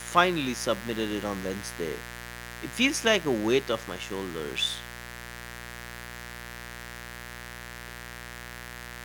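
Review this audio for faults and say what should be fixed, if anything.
A mains buzz runs through the whole speech clip. It sits on a 60 Hz mains frequency, with harmonics reaching well up into the kilohertz range. Switching spikes arrive twice per cycle, giving a raspy edge. It is loud, roughly 15 dB below the speech. Fix it at the source with proper shielding and grounding, kept away from dimmers and rectifiers.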